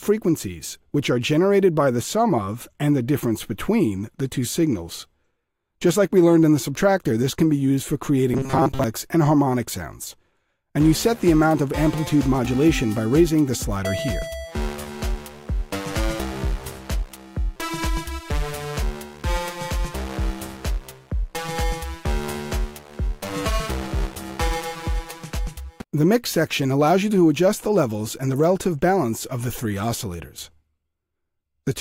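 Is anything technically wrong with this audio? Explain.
Yes. From 8.34 to 8.84 s the sound turns into a rigid, metallic 134 Hz buzz, a robotic sound from repeated short buffers. The likely cause is audio arriving too seldom, so roughly 7.5 ms chunks were looped over most of that stretch while the real audio was skipped.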